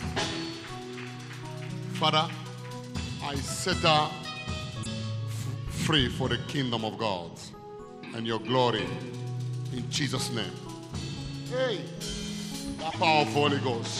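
Corrupted bytes in the compressed stream twice threw the decoder out of sync, so it misread frames while hunting for the next valid header. This damaged data in a compressed stream is heard as brief glitches, from 4.80 to 4.87 s and from 12.87 to 12.95 s.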